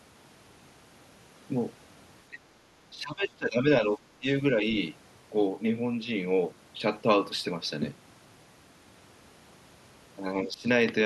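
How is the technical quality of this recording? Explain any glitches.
The speech in this recording is repeatedly pulled down in level. It dips at 2.30 to 2.42 s, 2.91 to 4.00 s, 4.19 to 4.43 s and 10.43 to 10.67 s, sinking by roughly 20 dB at its deepest. The longest dip covers about a second; the others are brief. This is speech suppressed in double talk, likely from an echo canceller. With both ends talking at once, it cannot tell the near talker from loudspeaker echo, so it ducks everything.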